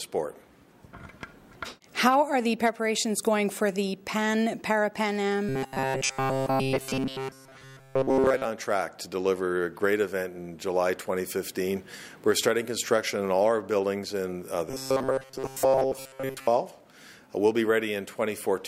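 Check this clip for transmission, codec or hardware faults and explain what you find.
Two bursts of robotic sound from repeated short buffers occur, at 5.49 to 8.46 s and again at 14.70 to 16.47 s. The likely cause is audio arriving too seldom, so the playback side keeps re-sending its last fragment of about 7.5 ms for most of each stretch while the real signal is skipped. That loop stamps a fixed 133 Hz pitch onto the audio, turning it into a stiff metallic buzz that only loosely tracks the underlying sound.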